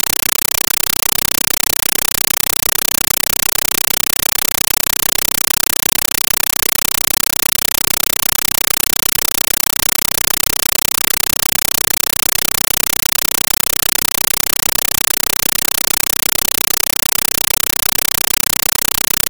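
From start to finish, the sound is replaced by harsh, very loud static. This is a compressed stream played as audio. An AC-3 bitstream reached the output as if it were ordinary samples and was never decoded. Each coded frame comes out as a burst of noise about 8 ms long, then silence from the padding. The bursts repeat 31.25 times a second. That gives a rapid, chattering buzz. The density of the noise fits a 384 kbps stream.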